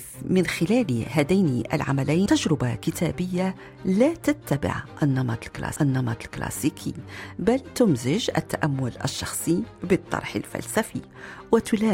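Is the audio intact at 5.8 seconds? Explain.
No. At 5.76 s there is a sharp tick and the sound lurches, carrying on from a different point rather than where it should. This is a CD skip: a physical knock or a flaw on the disc threw the laser onto another turn of the spiral track. The player muted for only a few milliseconds, then resumed reading from the new turn, so the audio jumped by whole revolutions of the disc.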